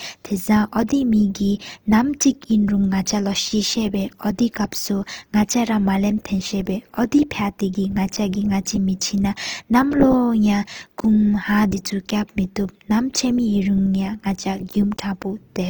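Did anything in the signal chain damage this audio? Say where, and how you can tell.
Yes, at the codec stage, across the whole speech clip. The voice sounds grainy and rough, with a noisy texture where its harmonics should be clean, yet the band stays full, with content reaching about 20.2 kHz and little swirling and few holes in the spectrum. That points to likely Opus compression in its music (CELT) mode at a low rate, fitting roughly 24 kbps: starved bands are filled with folded or noise energy, roughening the tone instead of narrowing it.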